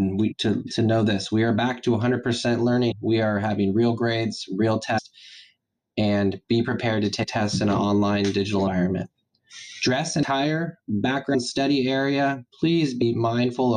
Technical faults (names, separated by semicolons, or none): compressed frames skipped